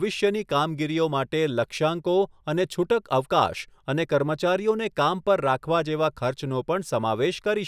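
No technical faults can be heard anywhere in the recording.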